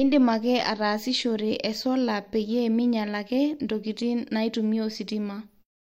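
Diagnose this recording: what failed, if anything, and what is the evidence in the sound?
Nothing failed in this recording; the sound simply fades out smoothly from around 5.5 s to 5.65 s, as an editor would end it.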